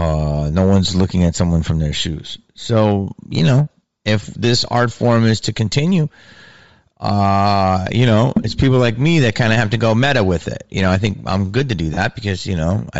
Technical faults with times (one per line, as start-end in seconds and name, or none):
0.00-13.00 hard clipping
0.00-13.00 Bluetooth LC3 compression
8.43 lost LE Audio frames
11.94-11.97 lost LE Audio frames